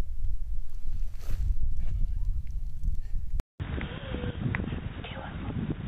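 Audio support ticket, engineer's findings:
Input switched to a poorer device at 3.4 s, running to the end. Short gap of 200 ms at the switch, then dull, boxy sound, level down around 10 dB, new low noise floor roughly 50 dB under the signal. Spectrogram: energy cut off flat above 3.8 kHz after the gap. Waveform: brief flatline, then smaller envelope. Likely a change of capture device, such as a headset call profile, with narrower bandwidth.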